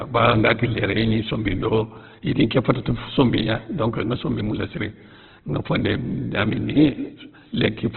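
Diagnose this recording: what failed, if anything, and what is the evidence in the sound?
The failure sits at the codec stage, and the likely cause is Opus compression applied heavily across the whole speech clip. Nothing reaches above 4.4 kHz, so the sound is narrowband and muffled, and the voiced parts come through rough and grainy rather than swirling. A spectrogram would show a flat ceiling at 4.4 kHz and smeared, noise-textured bands below it instead of clean harmonics. That fits a very low bitrate, around 12 kbps, starving the music-mode encoder of bits.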